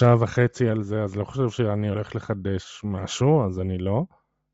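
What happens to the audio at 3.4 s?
At 3.4 s the speech has the same breathy, grainy edge it carries through the whole clip, with the top end smeared into hiss. That's likely Bluetooth LC3 compression: at a low rate, around 32 kbps judging by the damage, the codec drops much of the upper spectrum and fills it back in with noise.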